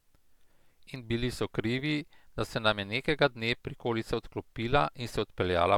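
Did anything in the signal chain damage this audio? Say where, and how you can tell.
No, nothing in the signal chain stood out as damaging this speech on listening.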